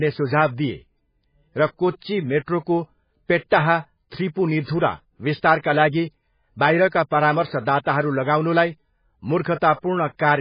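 From start to finish the speech sounds watery and swirly, with sibilants smeared and no content above 5 kHz, most likely from heavy MP3 compression at a very low bitrate, around 16 kbps. A spectrogram shows a hard ceiling at 5 kHz and flickering, patchy gaps below it.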